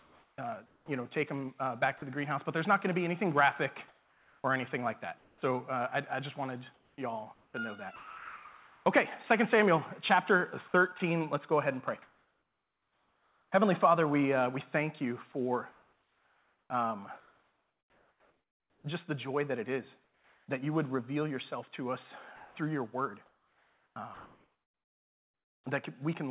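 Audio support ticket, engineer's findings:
Sound chopped by the voice detector at 0.00–2.02 s, 6.74–8.86 s, 10.68–11.00 s and 15.32–20.48 s. Choppy sound. Likely cause is the sender's VAD toggling transmit on and off, so the gaps are filled with comfort noise. About 0.64 s, 1.34 s, 0.08 s and 3.08 s of the sound is lost in each stretch. This is worst at 15–20 s.

Comfort noise in place of the background at 3.88–5.42 s and 22.36–25.66 s. Real background replaced by smoother synthetic noise. Likely cause is discontinuous transmission during pauses, with the receiver synthesising shaped noise. About 0.8 s and 2.4 s are substituted. Noticeable as a texture change until the sound resumes.

Onset clipped by the voice detector at 5.39–5.42 s and 23.93–23.96 s. Sound starts abruptly, missing its soft attack. Likely cause is the VAD reacting late, so about 30 ms of the onset is never sent. Band limit at 4 kHz throughout fits a G.711 mu-law call path.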